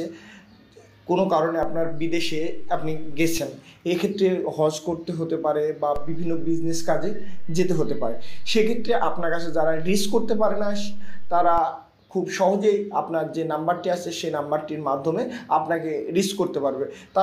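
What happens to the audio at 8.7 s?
A DC step covers 8.7 s: from 5.96 s to 11.58 s the waveform's zero line sits displaced by about -21 dBFS, as if an offset voltage had been switched into the signal path. At 8.7 s the sound rides on that shifted baseline and passes unchanged. The offset itself is inaudible while it holds. The jump is what you hear, as a low thump at 5.96 s when the level steps away.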